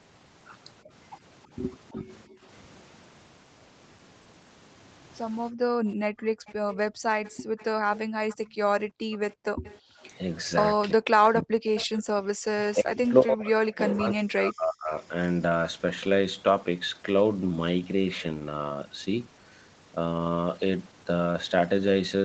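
From 1.93 to 2.42 s the room background is gated by the echo canceller: while the far end plays, the canceller clamps the microphone, pulling the noise floor down by about 26 dB for roughly 0.3 s. On a waveform the low-level hiss visibly collapses, and the spectrogram shows the background band thinning to near-empty columns before recovering.

Inside that dip, at 2.08 to 2.16 s, a brief echo leak appears, likely from a loudspeaker path the canceller failed to fully subtract. It is a faint copy of the far-end talker delayed by 321 ms and roughly 30 dB below the speech, visible only as a weak ghost of the earlier harmonic pattern.

Gating returns over a longer span, 5.52 to 9.98 s, with drops as deep as about 36 dB adding up to around one and a half seconds. The background cuts in and out, giving the spectrogram a patchy, striped floor between utterances.

From 6.46 to 11.86 s the echo leak is stronger and sustained. 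A delayed copy arrives 341 ms behind the original, roughly 20 dB down. It shows as a faint duplicate of the harmonic stack shifted right in time.

Speech is suppressed in double talk from 10.93 to 14.94 s. With both sides talking, the canceller likely mistook the near-end voice for echo and ducked it in pieces, by as much as roughly 40 dB over about 3 s in total. The talker dips, and the waveform envelope shows ragged notches. Within this stretch, at 12.03 to 12.13 s, a short burst of background gating drops the floor by about 40 dB. Throughout, the call microphone processing's band limit is visible as nothing above 8 kHz.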